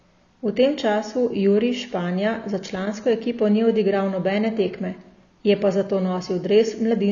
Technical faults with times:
0.00-7.12 AAC compression

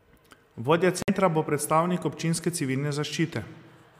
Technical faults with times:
1.02-1.10 Bluetooth stall

